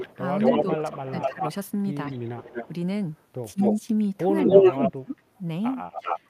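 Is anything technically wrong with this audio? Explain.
Yes. From 0 to 1.53 s, 2.08 to 3.8 s and 4.44 to 6.2 s, a delayed copy of the speech trails it by about 230 to 250 ms. It is roughly as loud as the speech, then quieter, then louder. This is echo leak, likely a far-end echo canceller passing its loudspeaker pickup back.

At 0.6 to 1.42 s, 2.11 to 2.2 s, 3.53 to 3.6 s and 4.43 to 5.19 s, the speech dips sharply, deepest in the last span, about 30 dB. This is speech suppressed in double talk, likely the canceller ducking its own talker along with the loudspeaker echo during overlap.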